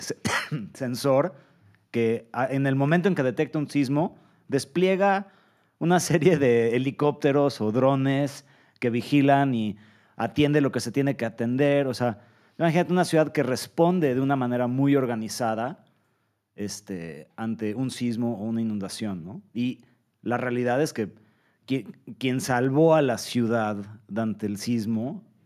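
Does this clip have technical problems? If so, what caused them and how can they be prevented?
No, there's nothing technically wrong to hear in this speech clip, so there's no cause to track down or fix.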